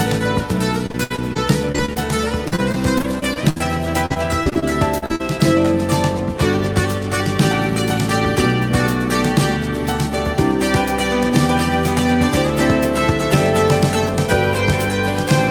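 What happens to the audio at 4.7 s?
At 4.7 s the sound turns choppy and robotic, with small pieces missing, part of a stretch of repeated packet loss from 4.06 to 5.21 s. Nine gaps, the longest 43 ms, were each patched by extending the preceding sound, covering about a fifth of the stretch.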